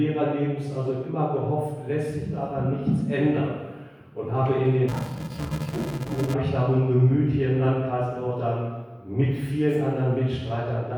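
From 4.88 to 6.34 s, interleaved audio is read as planar in 2.67 ms blocks, giving a dull, robotic buzz at 375 Hz with no octave drop, unlike a pitch shift.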